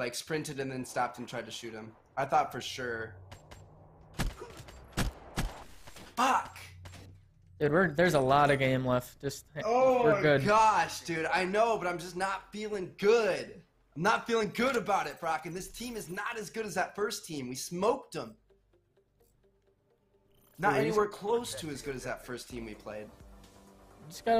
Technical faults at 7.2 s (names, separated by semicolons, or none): drift correction step